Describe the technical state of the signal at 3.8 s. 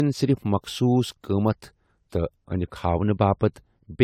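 At 3.8 s the speech carries generation loss, present across the whole clip rather than confined to this moment. Consonant attacks are blurred and the texture is swirly and hollow, with a smeared quality heavier than a single encode would produce. Content stops around 19.3 kHz. The likely cause is repeated lossy coding, consistent with AAC-LC at roughly 96 kbit/s applied about four times, each pass re-quantising on a shifted frame grid so artefacts accumulate.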